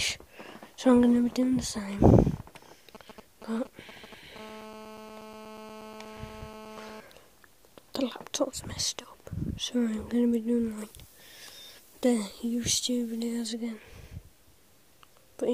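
From 2.95 to 4.38 s a galloping dit-dit-dit of short, raspy 217 Hz buzzes is heard, roughly 15 dB below the sound. These are GSM signalling bursts: a nearby 2G phone sends brief groups of radio bursts while it signals, and the audio circuitry rectifies them into audible pulses.

Straight after, from 4.39 to 7.00 s, the bursts become a continuous hard, gritty 217 Hz buzz full of harmonics, about 17 dB below the sound and unrelated to it. This is GSM phone buzz. The phone has moved into a call and transmits bursts 217 times a second without pause, and the circuitry demodulates that burst rate as a steady tone.

From 10.78 to 13.48 s the sound turns thin, glassy and edgy, with exaggerated sibilance. This is pre-emphasis left on: the treble boost applied for recording was never undone by the matching de-emphasis. At 10 kHz the top end sits about 8 dB above its level at 1 kHz, which fits the CD 50/15 µs curve.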